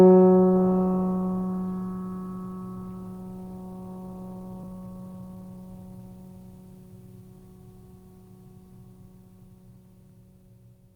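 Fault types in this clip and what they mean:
Skip ahead: at about 4.63 s the music jumps forward with no gap, losing roughly 0.7 s, because that stretch was dropped while later audio was already queued.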